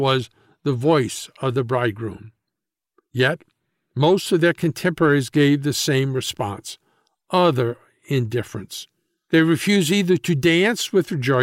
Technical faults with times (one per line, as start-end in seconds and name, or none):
0.11-11.39 clock slip clicks